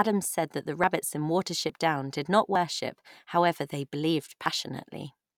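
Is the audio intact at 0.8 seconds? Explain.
No. At 0.84 s, just after "said that the", there is a dropped buffer (overrun): a small forward jump in the speech. It is likely that the samples weren't read before the hardware overwrote them, so about 20 ms is lost and the two sides join directly.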